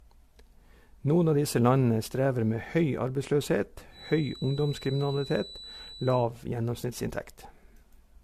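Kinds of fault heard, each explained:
Generation loss: The speech sounds swirly, smeared and hollow, with blurred attacks and nothing above 14 kHz. This likely comes from repeated lossy encoding, about four passes, which fits AAC-LC at 64 kbit/s. Each pass requantises on a shifted frame grid, so damage accumulates.
Feedback whistle: From 3.89 to 6.30 s a thin, steady tone at 4 kHz sits behind the speech, about 20 dB below it, swelling and fading slowly in level. This is likely a loudspeaker-to-microphone loop held just at the edge of feedback, ringing without running away.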